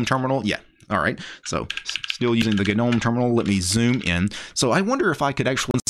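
Audio with two brief glitches, at 2.39–2.44 s and 5.71–5.75 s, from damaged data in a compressed stream. The decoder misreads the corrupted frames.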